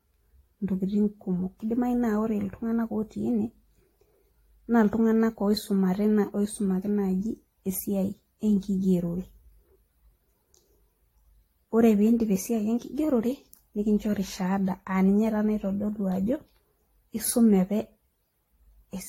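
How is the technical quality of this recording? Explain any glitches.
The quality is noticeably degraded throughout the whole clip. This speech has a swirly, hollow, smeared character, consonant attacks are soft and blurred, and nothing comes through above 16.5 kHz. That points to generation loss, likely from the audio passing through an AAC-LC encoder at around 64 kbit/s something like five times over. Every pass quantises again on a shifted frame grid, so the noise and spectral holes pile up and sound worse than one encode at that bitrate would.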